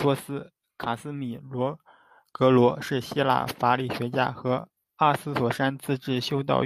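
Nothing technical stands out in this short speech recording; it's a straightforward bit of talking with no problems to point to.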